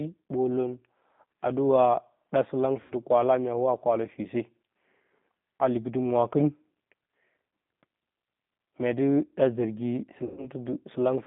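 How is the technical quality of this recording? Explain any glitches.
The quality is limited by the telephone codec throughout, with two short dropouts.

G.729 codec, throughout: the speech is rebuilt from a vocal-tract model and sparse pulses at 8 kbit/s, within about 150 Hz to 3.6 kHz. It sounds narrow, slightly rough and synthetic.

VoIP packet loss concealed by the speech codec, at 2.82 to 2.94 s and 10.24 to 10.50 s: about 80 ms and 130 ms of audio are missing. The decoder extends the last pitch and filter with falling gain, producing a fading smear of buzz or coloured noise.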